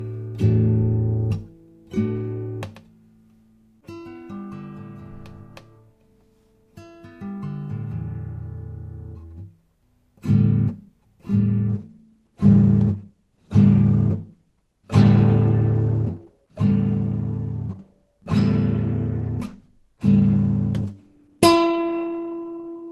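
At 11.69 s the audio switches abruptly, with no gap, to a lower-bitrate version of the adaptive stream and stays there to the end. The content above 12 kHz disappears and codec artefacts thicken, which fits a drop from about 64 to 16 kbit/s Opus as the connection slowed. The continuous, seamless change sets it apart from a dropout.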